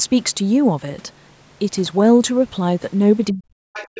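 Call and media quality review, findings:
Speech suppressed in double talk, 3.31 s to end of clip, about 0.7 s total. Level dips deeply, around 40 dB at worst. Likely echo canceller overlapped talk, unable to separate near talker from loudspeaker echo, attenuating both. Waveform: envelope collapses in gaps. Spectrogram: energy thins.

Other side's voice leaking through, 3.73 s to end. A second voice sits roughly 20 dB under the talker. Likely residual echo the canceller missed, loudspeaker output re-entering the microphone. Spectrogram: faint separate harmonic traces overlapping main speech. Waveform: low-level fill in the dips.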